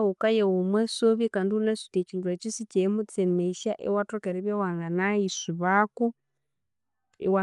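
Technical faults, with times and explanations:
Throughout, Dolby Digital compression: the speech sounds dull and plainly damaged, with nothing above 11.4 kHz and a rough, fluttering noise around tones. The likely cause is an AC-3 encode at a low rate, fitting about 64 kbps, that narrowed the band and left many frequency lines to be filled with dither noise.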